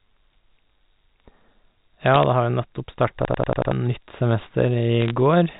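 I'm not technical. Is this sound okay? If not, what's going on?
No. From 2.07 to 2.23 s, and again from 5.00 to 5.11 s, you hear brief bursts of sharp ticks and crackle over the speech. These are bit errors on a digital phone line: a small fraction of the digital bits were garbled, so individual sound samples jump to wrong values.

From 3.25 to 3.72 s the speech stops moving forward and one tiny fragment, about 93 ms long, repeats five times in a rapid machine-gun stutter, roughly 11 times a second. This is a system hang loop: the computer froze while the sound hardware kept replaying the same bit of buffered audio, and about half a second of speech is lost.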